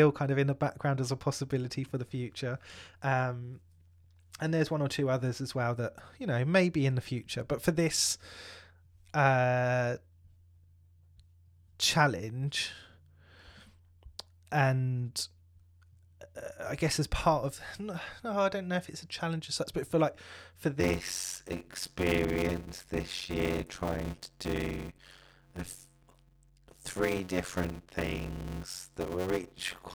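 Right after "but for like for", at 20.8 s, a block size mismatch (padded) kicks in and runs to the end. Short 256-sample blocks get zero-filled, so you hear a buzz at about 91.9 Hz, and the speech drags at 0.533× speed with timbre intact, up to "different and each".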